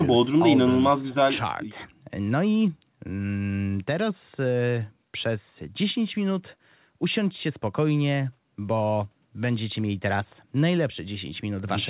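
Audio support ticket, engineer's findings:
Nothing stood out on listening to this speech clip, with the narrow call bandwidth that stops around 4 kHz being what a normal call path produces.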